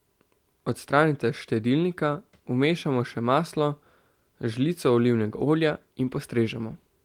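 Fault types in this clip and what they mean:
No technical faults can be heard anywhere in this speech recording. There is nothing to list under any fault type.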